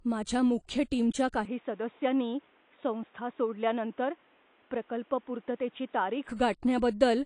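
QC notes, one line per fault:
throughout: low-bitrate audio saved at a high bitrate. The MP3 runs at 172 kbit/s, yet nothing sounds above 10.1 kHz and the artefacts of the first encoding remain. The likely cause is an earlier low-bitrate encode, around 32 kbit/s AAC, whose losses the generous bitrate cannot restore.
1.45–6.29 s: input switched to a poorer device. The band abruptly narrows to nothing above 3.8 kHz, the level falls by about 5 dB, and a new noise floor appears roughly 35 dB down. There is no gap at either switch. Unlike a codec fault, it clears at 6.29 s, likely a change of microphone.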